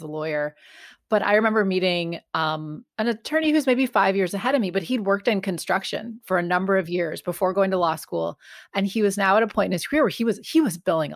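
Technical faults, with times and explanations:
No technical faults are audible in this speech.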